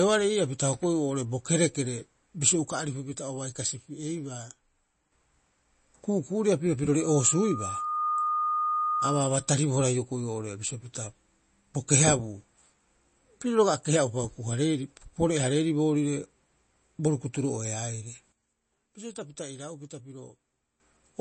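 Speech recorded with three kinds of technical fault. The whole recording has likely been through heavy MP3 compression, which fits a low bitrate of around 32 kbps. The encoder cuts everything above 8.3 kHz and switches weak frequency lines on and off between frames, so the speech sounds dull, watery and swirly, with smeared consonants. The digital level also drops in two sudden gain jumps, likely from a gain change applied without a ramp. Just after "bo kerekere bisio", from 2.72 to 5.12 s, it falls by about 6 dB. From 18.32 to 20.8 s it falls by about 12 dB. Each time the speech and the background noise step down together at once, and each returns just as abruptly. Between 7.00 and 9.54 s there is loudspeaker feedback squeal. A microphone picked up its own loudspeaker, and the loop gain exceeded one at 1.2 kHz. Starting right after "ku'uku'uria pirio", a steady 1.2 kHz tone swells over about a second until it is roughly as loud as the speech. 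It then stops before "hioko'i oo'ore bisio pita".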